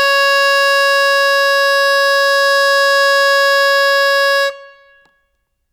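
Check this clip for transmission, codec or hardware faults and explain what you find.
No transmission or hardware faults are audible in this music.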